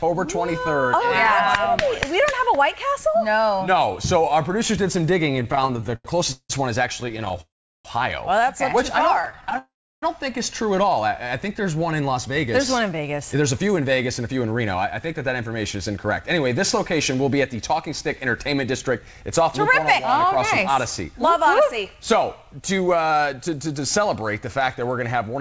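Audio carried over a call link, band-limited with nothing above 8 kHz, which fits the G.722 wideband codec at 64 kbps, shows three kinds of jitter-buffer fault. Repeated stalls (stutter) appear first from 5.32 to 6.51 s, where the playback breaks up 19 times. The receiver stretches the last sound to cover each shortfall, the longest about 177 ms, so roughly a third of that stretch is filler, totalling 427 ms, yet nothing is lost. Shorter bursts of the same stutter follow from 7.01 to 7.39 s and from 9.14 to 9.56 s, each with 10 brief gaps of no more than 11 to 13 ms, giving a choppy, dragging texture. Each of those bursts runs straight into a call audio freeze, at 7.41 to 7.86 s and at 9.58 to 10.03 s. In each, the sound hangs and then drops to silence for about 0.35 to 0.37 s before resuming exactly where it stopped, inserting about 0.44 s of delay. The likely cause is packets held up in transit until the buffer ran dry. 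From 12.01 to 24.17 s a jitter buffer speed-up sets in. Having built up surplus delay, the receiver trims short pitch-period-length slices again and again, removing about a second in total. Playback runs at about 107% speed with the pitch unchanged, so the audio sounds slightly hurried.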